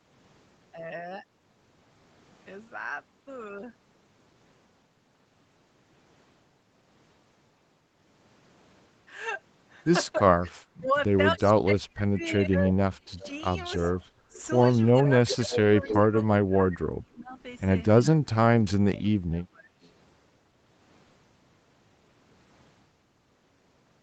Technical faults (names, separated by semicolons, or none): speech suppressed in double talk; echo leak